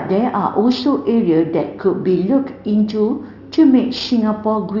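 Aliasing runs through the whole speech clip. Energy above 6 kHz folds back downward, which fits a drop from 16 kHz to 12 kHz sampling without an anti-alias filter. Sibilants turn gritty and metallic, with the folded content roughly 20 dB under the signal.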